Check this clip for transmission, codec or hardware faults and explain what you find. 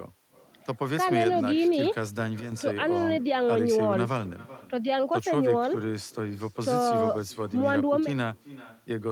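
Two faults can be heard in this speech clip: an echo that runs through the whole recording, and an abrupt level change early on.

Echo with no canceller, throughout: the far end is playing the call over a loudspeaker, its microphone captures that playback, and no echo canceller strips it out before sending it back. Each phrase therefore returns after the network round trip, roughly 400 ms later, at about 18 dB below the direct speech. It trails the talker as a faint, thinner shadow.

Sudden gain jump, 2.4 to 2.52 s: the level drops by about 8 dB with no fade, and the speech and the background noise fall together at the same instant. That points to a step change in digital gain, likely a setting or bit shift applied between one sample and the next without a ramp. It sounds like someone flicking a volume control, a hard, immediate dip rather than a gradual one.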